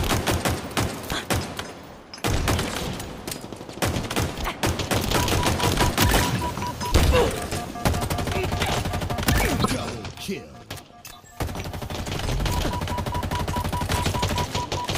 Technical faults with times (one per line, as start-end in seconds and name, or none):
1.61 damaged data in a compressed stream
9.60-9.66 damaged data in a compressed stream